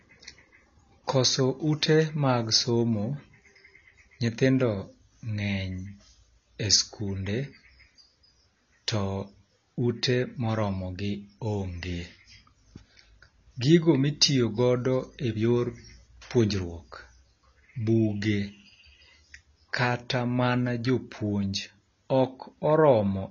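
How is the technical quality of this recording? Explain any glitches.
The technical quality is poor, with plainly audible compression damage running through the whole recording. The likely cause is AAC compression: at a low data rate (the damage fits roughly 24 kbps AAC-LC), the encoder spent too few bits on each frame, discarding the upper spectrum entirely and coarsely quantising what remained. As a result, nothing reaches above 7 kHz, so the speech sounds dull and muffled, and the sustained vowels and sibilants take on a smeared, warbling, fizzy texture that is plainly audible from start to finish.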